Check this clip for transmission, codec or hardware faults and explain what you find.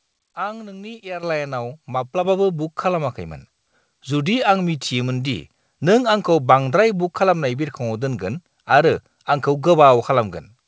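There are two faults, both the microphone volume stepping up. At 1.23 s the level jumps by about 9 dB, and at 2.25 s by a further 6 dB or so. Each time, the call software judged the input too quiet and raised the device's input volume in a single step rather than ramping it. Speech and background noise therefore rise together, abruptly, heard against the call codec's band limit with nothing above 8 kHz.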